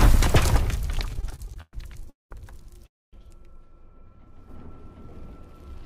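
From 1.14 to 2.08 s the sound drags and stutters through thirteen brief holds, the longest about 112 ms, together about 250 ms, roughly a quarter of that span. These are repeated stalls (stutter): packets arrived late, the jitter buffer kept running dry, and the receiver stretched the last sound until it could continue, so nothing is lost.

Two call audio freezes follow, at 2.10 to 2.32 s and 2.87 to 3.14 s. Each briefly carries the last sound on as a fading buzz or hiss before going silent for most of the pause, about 170 ms and 240 ms, then resumes where it stopped. The likely cause is packets held up in transit, adding roughly 210 ms and 260 ms of delay.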